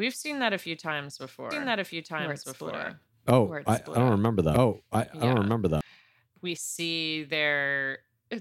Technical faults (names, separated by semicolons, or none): doubled audio track